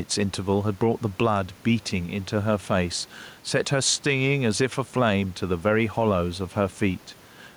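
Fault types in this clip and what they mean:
gain pumping: The background swells in each pause and ducks by roughly 5 dB under loud speech, likely a fast limiter fighting excessive input gain. The waveform shows flattened, even peaks; a spectrogram shows the room noise, about 32 dB down, brightening between phrases.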